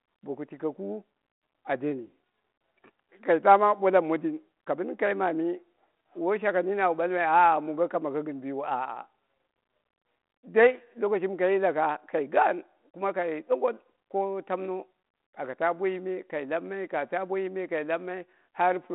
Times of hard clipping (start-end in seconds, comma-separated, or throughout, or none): none